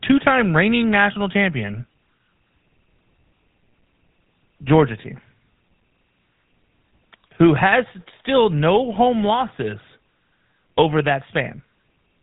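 From start to finish the speech carries GSM full-rate codec damage, and it's plainly audible. That old phone codec rebuilds the voice from a vocal-tract model excited by a sparse, regularly spaced pulse train, so the fine detail of the excitation is thrown away. What you get is that buzzy, gravelly grain on every syllable, plus a hard ceiling at about 3.9 kHz. The sound fits a 13 kbps GSM full-rate encode.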